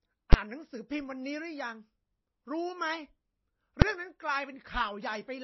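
Speech runs throughout with a watery, swirling quality and no content above 5.8 kHz. This is plainly audible MP3 compression, likely from encoding at a low bitrate such as 24 kbps. Starved of bits, the encoder has cut the treble at a fixed ceiling and dropped weak frequency lines that flicker on and off between frames. That gives s sounds a metallic chirp and softens attacks. On a spectrogram this shows as a hard horizontal edge at 5.8 kHz, with patchy, blotchy holes in the energy below it. Two single bangs mark invalid numbers at full scale, at 0.33 s and 3.82 s. In each, a calculation produced infinite or invalid values that were forced to the largest possible sample value for one short processing block. The first lasts about 12 ms, which fits a 512-sample block, and the second about 3 ms, which fits a 128-sample block. Both are too brief to be heard as separate pops. In the waveform each appears as a flat slab pinned at one extreme value far beyond the speech peaks, and on a spectrogram as a thin vertical stripe spanning every frequency.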